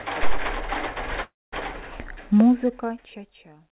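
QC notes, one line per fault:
1.22 to 1.54 s, call audio freeze: the speech stops dead and the last bit of sound gets stretched into a short fading buzz, then about 0.22 s of silence, before it picks up exactly where it left off, so nothing's actually lost, just a gap of roughly 0.3 s pushed in. That's likely packets stalling in transit and the jitter buffer running dry, on a narrowband call path with nothing above 4 kHz.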